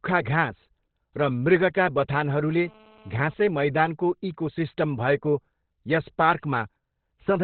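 From start to finish the speech is muffled and hoarse, with heavy coding damage and nothing above about 4.3 kHz. The cause is likely Opus compression in its narrowband SILK speech mode, which fits a very low bitrate near 12 kbps.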